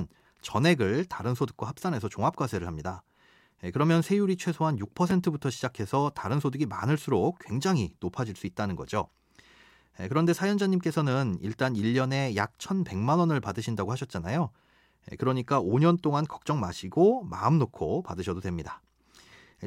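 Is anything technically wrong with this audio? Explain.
Yes. At 5.10 s the speech has chunks out of order: one block of about 5.8 ms arrived a chunk late and played after the one meant to follow it. The swap leaves hard joins heard as a tiny jumble. Unlike a dropout or gap, nothing goes missing.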